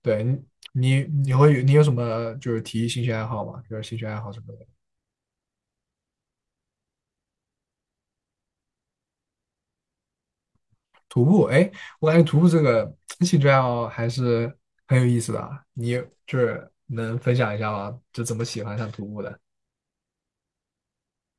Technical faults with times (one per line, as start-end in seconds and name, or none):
none